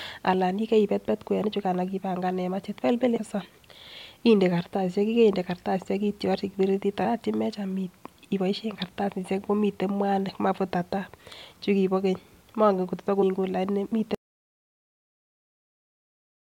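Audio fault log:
3.16 to 3.18 s, 7.04 s, 13.21 s: damaged data in a compressed stream. Each is a brief glitch. Corrupt bytes throw the decoder out of sync until it finds the next frame.
14.15 s to end: audio dropout to silence. The speech cuts off mid-flow into complete silence with no room tone. The input was likely lost while silence kept being written.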